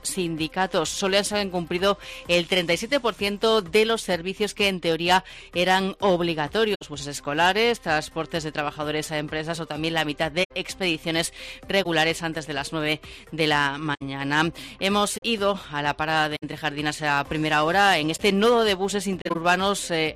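At 6.74–6.82 s, 10.43–10.52 s, 11.83–11.86 s, 13.94–14.02 s, 15.17–15.22 s, 16.36–16.43 s, 18.14–18.20 s and 19.22–19.36 s you get a corrupt frame concealed. Damaged AAC frames were caught by the decoder and papered over with muting or a scrambled reuse of the last clean spectrum. Four run about 80 ms, the shortest fits roughly one frame, and the last one stretches to about 140 ms.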